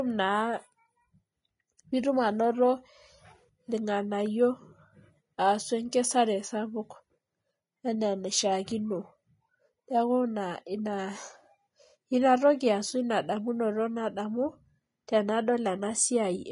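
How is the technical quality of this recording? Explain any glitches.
The recording has plainly audible coding damage throughout and one brief pre-echo near the end.

Vorbis compression, running through the whole clip: the stream was likely encoded with Vorbis at a low quality setting, the kind of heavy squeeze that fits a bitrate around 30 kbps. The encoder discarded everything above 10.6 kHz and quantised the remaining treble so coarsely that fine detail was replaced by noise of similar energy. The speech therefore sounds dull at the top yet hissy and grainy, with roughened tone and softened consonant attacks.

Pre-echo at 15.07 s: a sharp onset landed late in a transform block, and the codec spread that block's quantisation noise evenly across its full length, including the quiet moment before the attack. The result is a short hiss smeared about 11 ms ahead of the onset, so the attack arrives blurred and less crisp than it should.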